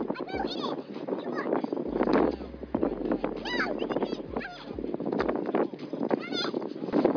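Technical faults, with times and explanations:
No technical faults can be heard anywhere in this audio. There is nothing to time or explain.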